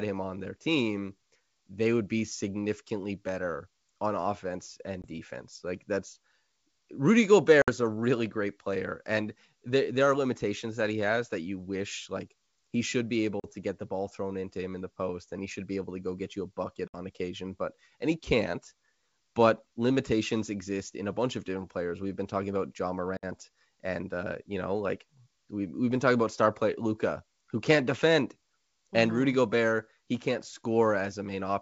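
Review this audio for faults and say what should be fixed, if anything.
Packet loss on an ADPCM call leaves hard-edged silent gaps at 5.02 s (20 ms), 7.62 s (60 ms), 13.40 s (40 ms), 16.88 s (60 ms) and 23.17 s (60 ms). Each gap desynchronises the decoder's adaptive predictor and step size. Speech then returns slightly distorted before settling. Adding packet loss concealment that also resynchronises the ADPCM decoder state would prevent this.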